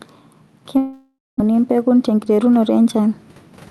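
A short speech recording passed over a call link, and gain pumping runs through all of it. The level ducks by roughly 5 dB under each loud syllable, so the level breathes and loud and soft parts sit squashed together. On a waveform the peaks look flattened. The likely cause is a microphone gain set far too high, with a fast limiter clamping down on every loud moment. From 0.77 s to 1.42 s there is a long network dropout. The sound just before the gap is stretched into a buzzy, fading tail, followed by about 210 ms of near-silence, and the audio resumes with roughly 600 ms of material simply gone. On a spectrogram the harmonics smear into flat, decaying horizontal bands, then a blank stretch, then an abrupt restart. This is most likely packets that never arrived, which the receiver concealed before giving up. Between 2.03 s and 2.41 s a jitter buffer speed-up plays the audio at about 110% speed with unchanged pitch, so this stretch sounds hurried. 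The receiver trimmed around 40 ms in small pitch-period-sized cuts to reduce a backlog, which shows as a slightly compressed waveform with no shift in the harmonic spacing.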